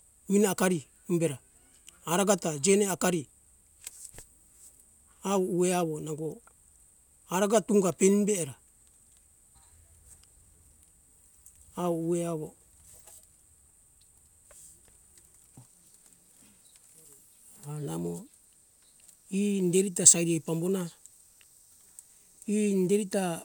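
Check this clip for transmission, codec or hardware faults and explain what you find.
Listening through the speech, I hear no transmission, codec or hardware faults anywhere in the signal.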